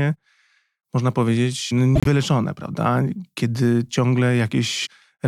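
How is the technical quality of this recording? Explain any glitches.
One glitch stands out in this speech recording: a corrupt frame decoded between 1.95 and 2.07 s. For about a tenth of a second, damaged bits in the compressed stream were decoded as if valid, so misread gains and codes put energy at the wrong frequencies. The result is a chirp-like burst that peaks around -5 dBFS. Its length points to a few consecutive damaged frames. Unlike a click, it lasts about a tenth of a second rather than an instant.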